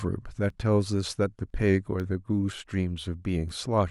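Speech with periodic USB or driver dropouts: tiny silent gaps, well under a millisecond, tick every 0.5 s from 0.50 to 3.49 s, about seven in all.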